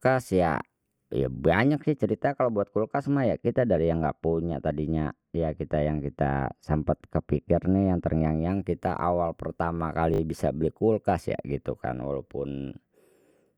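Twice in this speech recording new audio failed to reach the playback device in time, so it replayed its last buffer, a repeated buffer fault that fits a 20 ms buffer. At 1.36 s, just after "ya ya", one 20 ms slice plays twice, giving a quick click-like stutter. From 10.14 to 10.20 s, after "kita awal pertama" and before "bisa beli kulkas ya", the same slice sounds four times in a row with a hard join at each repeat, a brief buzzy stutter. No audio seems to be lost either time. Separately, from 1.75 to 8.50 s, running from after "ya ya" to just before "kita awal pertama", de-emphasis was applied wrongly: a treble-cutting filter meant to reverse pre-emphasis acted on audio that never had it, or was applied twice. The response falls smoothly toward the top end, to about 14 dB down at 10 kHz relative to 1 kHz, so that whole stretch sounds dull and muffled, with consonants losing their crispness.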